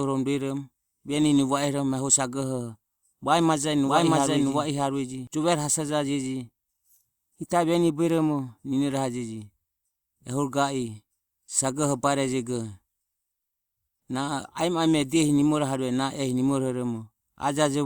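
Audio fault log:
3.85–5.27 s doubled audio track: a full-band copy trails about 0.7 s behind at similar level, cutting in and out abruptly without an echo's decay; likely a second capture path.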